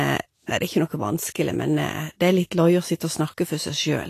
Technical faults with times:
0.00-4.09 Vorbis compression
2.96-3.00 pre-echo

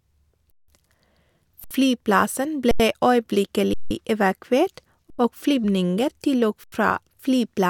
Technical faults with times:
0.51-0.68 underrun with held sample
1.64-1.71 underrun with held sample
2.71-2.80 underrun with held sample
3.74-3.91 underrun with held sample
5.10-5.19 underrun with held sample
6.64-6.72 underrun with held sample

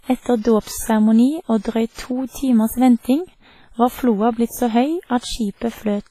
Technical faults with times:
0.00-6.10 WMA compression

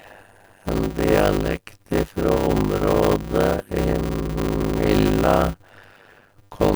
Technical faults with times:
0.00-6.76 block size mismatch (padded)

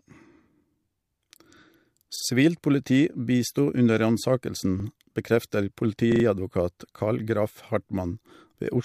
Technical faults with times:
2.16-2.24 repeated buffer
4.80-4.84 repeated buffer
6.12-6.24 repeated buffer

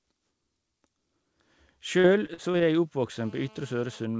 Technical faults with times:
2.00-2.62 repeated packet loss (robotic sound)
3.19-4.05 GSM phone buzz

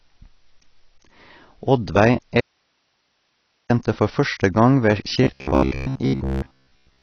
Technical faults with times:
0.00-7.03 AAC compression
2.40-3.70 audio dropout to a faint residue
5.24-7.02 robotic sound from repeated short buffers

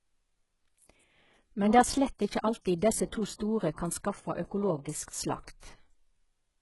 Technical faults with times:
0.00-6.61 HE-AAC compression

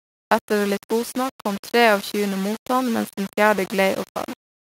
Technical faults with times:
0.00-4.79 low bit depth without dither

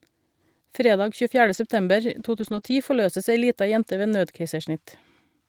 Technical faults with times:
1.45-1.59 lost packet rebuilt from error correction
2.35-2.73 lost packet rebuilt from error correction
2.59-2.63 short concealed packet loss

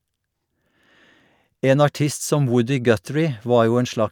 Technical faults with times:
none

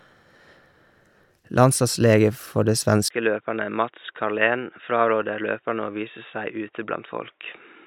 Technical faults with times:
3.08-7.87 input switched to a poorer device

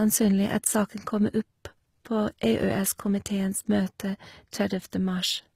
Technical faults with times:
0.00-5.55 transcoding between lossy codecs

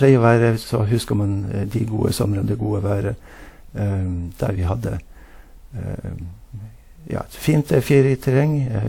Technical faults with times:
0.00-8.89 generation loss

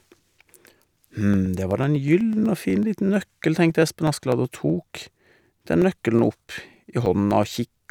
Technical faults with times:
0.09-7.81 periodic USB or driver dropouts

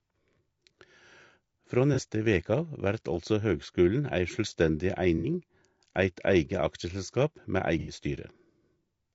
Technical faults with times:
0.00-9.14 low-delay AAC compression
1.94-1.99 AAC frame loss with concealment
5.18-5.25 AAC frame loss with concealment
7.79-7.93 AAC frame loss with concealment

